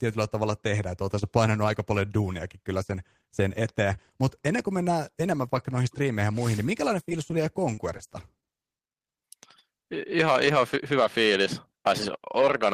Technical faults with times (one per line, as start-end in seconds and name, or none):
7.09-7.13 short concealed packet loss
7.74-8.09 short concealed packet loss
8.40-8.44 short concealed packet loss
8.46-8.50 short stall from a late packet